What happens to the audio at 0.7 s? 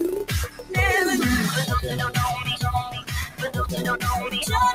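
At 0.7 s the sound is in a dip caused by sound cut by the noise suppressor, running from 0.47 to 0.72 s. The suppressor mistakes this stretch for noise and pulls it down by up to about 12 dB. Sustained parts sink and their tail shortens.

This happens because a noise suppressor built for speech is applied to music or sounds throughout the clip. It treats steady content as noise, so the level keeps swinging by around 10 dB. The audio pumps and thins rather than holding steady.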